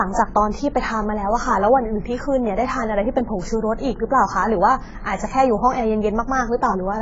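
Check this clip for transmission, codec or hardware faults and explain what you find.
One codec fault runs through the whole recording. Throughout, the speech sounds dull and smeared, with nothing above 7.7 kHz and a warbling, fizzy texture on sibilants and held sounds. The likely cause is heavy AAC compression. Starved of bits, AAC-LC discards the upper bands and coarsely quantises what remains, which fits a bitrate near 16 kbps.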